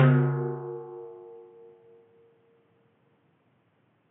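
No technical faults are audible.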